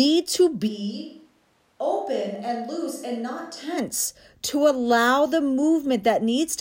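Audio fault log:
0.69–3.77 s, switch to a distant microphone: the speech abruptly turns roomy and hollow, thinner in the bass, and drops by about 10 dB, with room noise sitting roughly 35 dB below the speech. The close microphone's signal likely dropped out, leaving a far pickup. On the waveform the envelope steps down sharply at the start and back up sharply at the end. The spectrogram shows weaker low frequencies, reverberant smearing after syllables and a raised noise floor.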